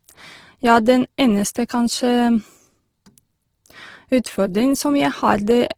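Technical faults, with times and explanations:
Throughout, Opus compression: speech turns grainy and rough, with noisy band filling across full bandwidth, likely from music-mode Opus coding, which fits a rate near 16 kbps.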